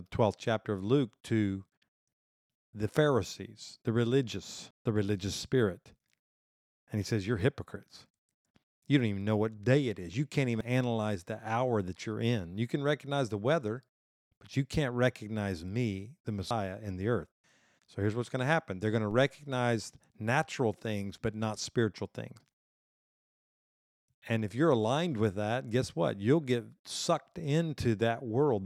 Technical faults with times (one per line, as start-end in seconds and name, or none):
4.71 audio missing between chunks
10.61 audio missing between chunks
16.51 audio missing between chunks
19.11 DC step
22.41 audio missing between chunks